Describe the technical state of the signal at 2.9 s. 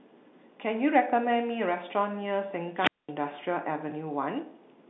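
At 2.9 s a wireless microphone squelch dropout is under way, spanning 2.76 to 3.11 s: the radio link fades and the receiver's squelch mutes the output for about 215 ms, so a short rise of static gives way to near silence before the speech resumes.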